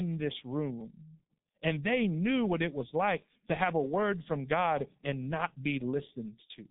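G.723.1 codec damage runs through the whole clip. The speech has passed through this low-rate telephony coder, whose heavy damage fits a rate near 6.3 kbit/s. Nothing survives above 3.8 kHz, and the line band sits at roughly 150 Hz to 3.7 kHz, so the speech sounds muffled and thin. The coder's slowly updated voice model, working in long frames, leaves a hoarse, rough quality and smears consonants together.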